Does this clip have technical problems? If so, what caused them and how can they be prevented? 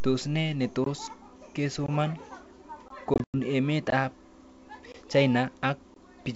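Yes. The audio was delivered in 1 s chunks, and a gap between chunks of 20 ms was left at each join, likely from codec padding or a player starting each chunk late. Nothing is lost, but the speech is cut by a short, hard-edged hole at 0.84, 1.86, 2.88, 3.90, 4.92 and 5.94 s, a regular once-per-second rhythm. Playing chunks back to back from a continuous buffer and trimming padding at each boundary prevents this.

From 3.14 to 3.38 s there is packet loss on an ADPCM call. Lost packets were filled with silence, about 140 ms in total scattered over 200 ms, with the longest hole 100 ms, which points to several lost packets. Because the decoder's adaptive predictor and step size drift out of step with the sender's, the speech returns after each hole slightly distorted before settling within some tens of milliseconds. The G.722 wideband coding at 64 kbit/s keeps the band up to 7 kHz with at most a faint hiss. 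Using packet loss concealment and resetting both predictors together after a loss prevents this.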